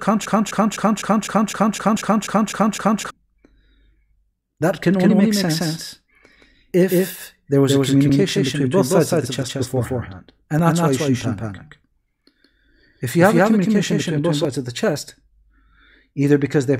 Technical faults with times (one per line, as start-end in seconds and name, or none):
0.00-3.10 broken-record loop
1.95 damaged data in a compressed stream
4.94-14.45 doubled audio track
5.09 damaged data in a compressed stream
8.08 damaged data in a compressed stream
10.59 damaged data in a compressed stream
14.96 damaged data in a compressed stream